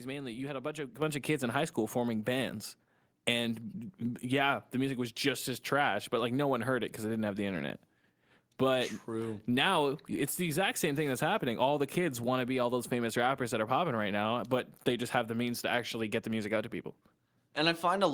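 At 1.02 s, between "had a bunch of" and "of kids in high", the microphone volume stepped up: the call software raised the device's input gain in a single jump of about 7 dB, so the voice and background noise become louder together.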